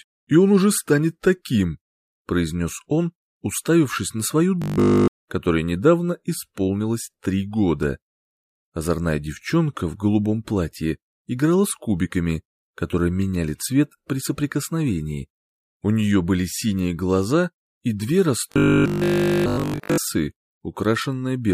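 From 4.62 to 5.08 s and again from 18.52 to 19.98 s, robotic sound from repeated short buffers: a rigid 50 Hz metallic buzz replacing nearly all the audio, likely from a repeated 20 ms buffer.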